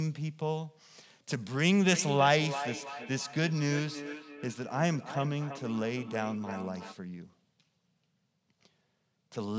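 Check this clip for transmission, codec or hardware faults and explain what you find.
One fault is present. From 1.92 to 6.98 s the speech is shadowed by a thin, ringing copy arriving about a third of a second behind it, peaking about 11 dB below the direct speech. This is feedback echo between two devices: one device plays out what the other's microphone sent, that microphone captures it again, and each echo canceller removes only its own device's playback. The audio's band ends at 8 kHz, consistent with call microphone processing.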